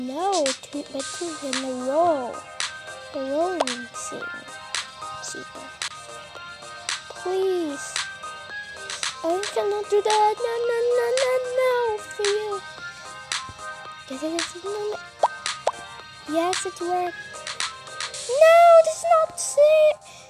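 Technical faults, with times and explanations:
No technical faults detected.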